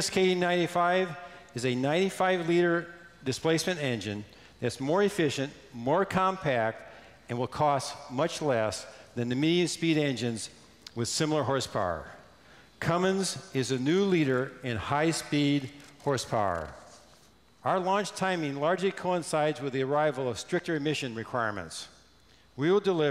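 No technical faults can be heard anywhere in the recording. Nothing in it points to a break, a level problem or damage from the signal chain.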